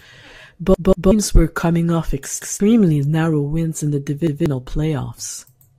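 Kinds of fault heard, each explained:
Repeated buffer: new audio arrived late, so the player replayed its last 186 ms chunk, giving hard-edged stutters before "were coming off" and twice more later.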